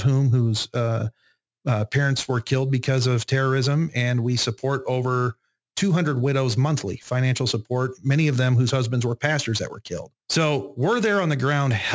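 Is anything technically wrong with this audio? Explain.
Yes. Aliasing runs through the whole speech clip. The sample rate was reduced without an anti-aliasing filter first, and the fold point at 8 kHz fits a drop from 44.1 kHz to 16 kHz. Energy that sat above 8 kHz was not removed but mirrored back below it, landing at unrelated frequencies roughly 20 dB under the speech. That gives the sibilants a gritty, metallic edge, and the spectrum stays full right up to the 8 kHz band edge instead of rolling off.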